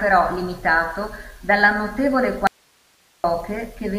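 A speech clip with an audio dropout to a faint residue. From 2.47 to 3.24 s, the speech cuts out abruptly for about 0.77 s. Only faint hiss remains, far below the speech level. The likely cause is a brief loss of the signal feeding a still-live input.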